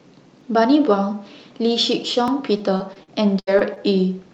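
At 0.41 s and again at 2.28 s, new audio arrived late and the device played its last buffer a second time. Each repeated buffer lasts about 1.45 ms, which fits a 64-sample buffer, so each one sounds like a single brief click rather than a stutter.

From 2.57 s to 3.78 s, packets went missing again and again. Seven gaps were patched by stretching the preceding sound, about 207 ms in all, with the longest near 76 ms. This repeated packet loss makes the speech choppy and robotic, with pieces dropped throughout that stretch.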